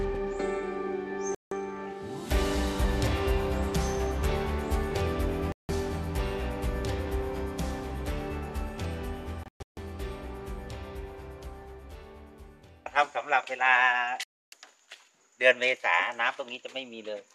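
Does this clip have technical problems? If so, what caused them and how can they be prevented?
Yes. Digital broadcast dropouts mute the sound at 1.35–1.52 s, 5.52–5.70 s, 9.43–9.78 s (several short holes, longest 0.14 s) and 14.23–14.53 s. The receiver discarded failed frames, consistent with 24 ms frames, and that audio is lost. Stronger reception or better antenna placement prevents this.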